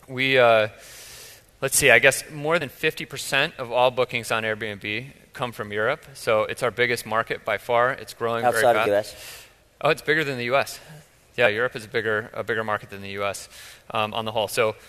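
Compressed frames skipped at 2.60 s, 8.85 s and 11.45 s: whole blocks of the encoded stream never reach the output, so the sound leaps forward instead of continuing. The first and last jumps lose about 50 ms, which points to roughly two frames of about 23.2 ms each. The jump at 8.85 s loses about 100 ms, nearer five frames.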